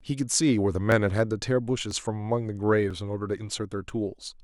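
Audio missing between chunks occurs at 0.92, 1.91, 2.91 and 3.90 s, a skip roughly once a second through the speech. At each point a sliver of sound, only a few milliseconds, is gone and the audio on either side is butted straight together with no gap, so the flow jumps slightly forward. The steady one-second spacing points to a recorder or processor working in 1.0 s blocks, likely dropping a little audio each time it hands over from one block to the next.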